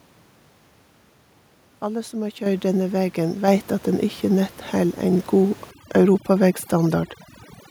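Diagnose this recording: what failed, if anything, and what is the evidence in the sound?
Microphone volume stepped up, at the call-processing stage: the automatic gain control judged the input too quiet and raised the microphone's level in single steps. At 2.46 s, between "som har" and "denne vegen", the whole signal jumps by about 8 dB, and at 3.48 s, after "denne vegen" and before "at den ikkje nett", by about 4 dB more. The voice and the room noise rise together, which points to the device input volume rather than the talker. On a waveform the envelope steps up abruptly. On a spectrogram every band, the noise floor included, brightens at once in a vertical edge.

Overdone noise removal, also at the call-processing stage, runs from 5.71 s to the end of the clip. The room noise, which before this sat about 25 dB below the speech, drops to near silence with twinkling residual specks. The voice's weaker components fall below the suppressor's noise estimate and are gated out along with the background. 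On a spectrogram the steady floor breaks into isolated flickering dots, and the quieter upper harmonics show holes and ragged gaps. On a waveform the stretches between syllables flatten almost to zero.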